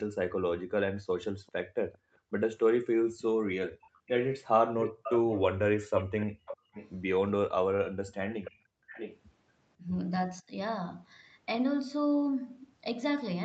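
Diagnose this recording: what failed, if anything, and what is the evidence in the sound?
Background gated by the echo canceller, in the call-processing stage: the room sound is pulled down hard at 1.43–2.32 s (about 40 dB), 3.90–4.06 s (about 34 dB), 6.34–6.73 s (about 26 dB) and 8.52–8.90 s (about 40 dB). Unlike a network dropout, only the background ducks, and it recovers when the canceller releases.

Echo leak, also call processing: a delayed copy of the sound returns at 1.47–1.98 s (396 ms later, very faint), 3.19–6.90 s (498 ms later, plainly audible) and 8.44–9.19 s (658 ms later, well below the direct sound). These are likely residual loudspeaker echo the far-end canceller missed. Room reverberation would instead be a smear starting within milliseconds, not a distinct delayed copy.

Speech suppressed in double talk, at the same stage: at 9.75–10.55 s the talker's own voice dips by roughly 20 dB while the other side is talking, most likely the canceller treating simultaneous talk as echo. 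Gating dips only the background, but here the main voice itself is cut.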